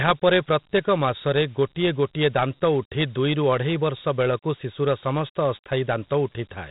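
Speech clip, stored throughout as Dialogic VOX ADPCM: coarse 4-bit steps, consistent with 32 kbps at 8,000 samples a second, leave gritty hiss trailing the speech and nothing above 3.8 kHz.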